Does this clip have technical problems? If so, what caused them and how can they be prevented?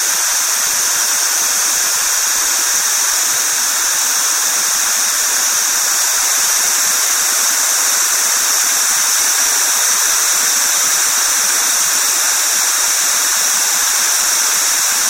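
No, nothing stood out on listening to this clip, so there is nothing to trace back to a cause or to guard against.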